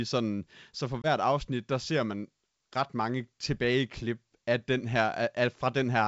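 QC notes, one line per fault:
1.02–1.07 s, packet loss on an ADPCM call: roughly one packet, 20 ms of the G.722 stream, was lost after "så for" and replaced by silence, knocking the decoder's predictor and step size out of step with the sender. A hard-edged hole follows, then the speech returns at "afsnit der ser man" with brief distortion until the decoder settles.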